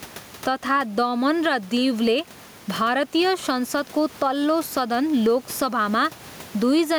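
Throughout the speech, gain pumping makes the level swing by around 10 dB, pulling down under each loud syllable and squashing the sound, likely from excessive gain hitting a fast limiter.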